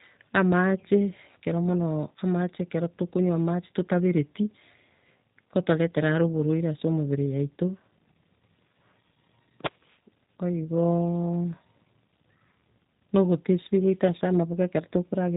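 From start to finish the speech carries G.729 codec damage, rough and faintly synthetic, as the pulse-based rebuild of each 10 ms frame replaces the natural waveform. A spectrogram shows a hard ceiling at 4 kHz with nothing above, which fits 8 kbit/s narrowband coding.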